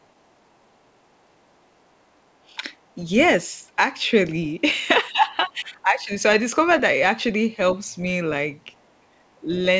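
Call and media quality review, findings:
Other side's voice leaking through, 0.03 to 0.07 s: brief, very faint second voice right at the start, way down under the main talker. Likely the echo canceller didn't fully scrub far-end audio coming off the loudspeaker into the mic. Same thing again 8.76 to 8.92 s: short, faint far-end scrap, somewhere around 40 dB below the talker, so you really have to listen for it. Residual echo slipping past the canceller each time.

Speech suppressed in double talk, 5.11 to 6.11 s: talker's level sags for about a second, at its deepest roughly 15 dB down. Likely the canceller caught both sides talking at once, couldn't tell near-end voice from loudspeaker echo, and clamped down on the whole mic signal instead of just the echo. Sounds like the talker briefly ducking away. Everything sits under 8 kHz throughout, which fits the wideband G.722 call path.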